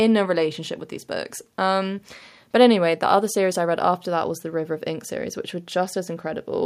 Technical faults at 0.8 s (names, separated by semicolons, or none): none